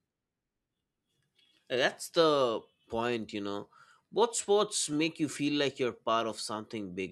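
Overlapping chunks at 4.93 s, just before "you feel like you're": the speech was handled in pieces of about 3.0 s, and the next piece began about 6.5 ms before the previous one finished. That sliver of audio is played twice at the join. Because the doubled section is so short, it doesn't come across as a repeated sound. It is heard as a brief click or tiny stutter in the flow of the speech.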